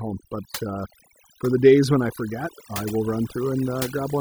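Overdone noise removal runs throughout, switching off frequency bands: the background twinkles in near silence, unlike a gate silencing everything.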